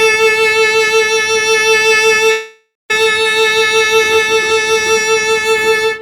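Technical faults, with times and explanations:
2.18–5.01 s, feedback whistle: A thin, steady tone at 3.8 kHz sits behind the music, roughly 15 dB below it, slowly swelling and fading in level. It holds at one pitch and never builds up. The likely cause is a loudspeaker-to-microphone loop running right at the edge of feedback. At that edge, one high frequency keeps ringing on its own without growing into a howl.
2.31–2.91 s, call audio freeze: The music stalls for about 0.58 s. The last sound is held as a fading buzz or hiss, and the final 0.19 s of that is silence. Playback then resumes from exactly where it stopped, so no music is lost. Everything after this point arrives about 0.58 s late. This likely comes from packets held up in transit, which left the jitter buffer empty until they arrived.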